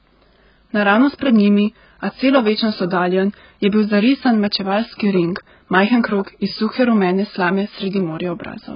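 Speech coded with AAC compression at a very low bitrate, likely around 12 kbps, loses everything above 5.1 kHz throughout, leaving it dull, smeared and warbling on sibilants.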